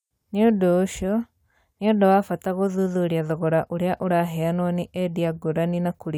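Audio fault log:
Nothing stood out on listening to the speech in this recording.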